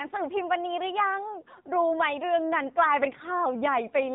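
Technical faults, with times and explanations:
Throughout, AMR narrowband mobile codec: nothing above about 3.8 kHz survives, so the speech sounds boxed-in and telephone-like, with sibilants dulled. The codec rebuilds each 20 ms frame from a vocal-tract model excited by a handful of pulses rather than sending the waveform itself. At this low bit budget, which fits a rate around 7.4 kbps, that coarse excitation is plainly audible as a buzzy, synthetic edge on the voice.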